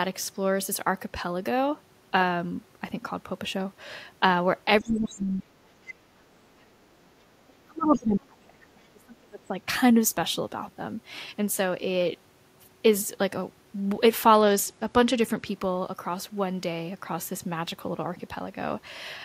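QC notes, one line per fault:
4.8–9.56 s, speech suppressed in double talk: the talker sinks by as much as about 30 dB in patches, likely an echo canceller ducking during overlap, unlike steady level loss.
4.87–5.21 s and 7.94–7.98 s, other side's voice leaking through: a faint second voice about 20 dB down, likely residual loudspeaker echo, heard as a separate talker rather than reverb.
14.34–15.47 s, Bluetooth SBC bit pool drop: treble dulls and gritty noise rises, fitting a bit pool fall from 31 to 12 (about 88 kbps), then recovers, unlike a lasting low-pass.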